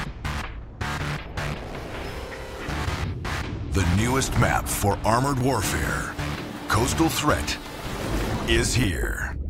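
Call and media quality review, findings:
Periodic USB or driver dropouts, 3.44–9.33 s. Regular ticks every 0.49 s, around fifteen of them, audible only where there's signal. Probable component: USB audio interface or its driver. Something keeps stalling the bus on a fixed cycle, and each stall skips roughly 10 ms of audio outright instead of filling it with silence, so the waveform jumps and clicks.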